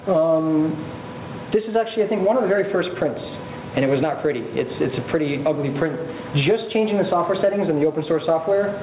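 Gain pumping runs through the whole clip, most likely because the input gain is set far too high and a fast limiter or compressor clamps it back down whenever a loud sound arrives. The level swings by around 15 dB, so loud and soft parts sit unnaturally close and the audio sounds squashed. The sound has also come through a call path, and nothing reaches above 4 kHz, consistent with narrowband G.711 A-law telephony coding.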